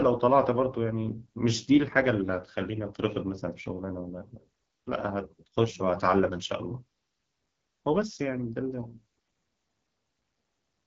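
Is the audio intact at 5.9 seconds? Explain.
No, not at 5.9 s. The whole clip runs through the AMR wideband (HD Voice) codec, so that moment is affected too. The speech has the rough, raspy edge this codec gets at its low rates, which fits about 8.85 kbit/s. At that rate the vocal tract model and pulse excitation are too coarse to track the voice cleanly. The top band is only shaped noise, and there's nothing above about 7.5 kHz.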